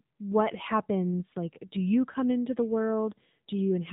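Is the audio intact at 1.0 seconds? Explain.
No, at 1.0 s the speech carries AMR narrowband mobile codec damage, as it does throughout: nothing above 4 kHz survives, and the pulse-driven vocal-tract model makes it buzzy and synthetic, fitting a low mode near 7.4 kbps. A plain telephone band-limit would sound dull but not artificial.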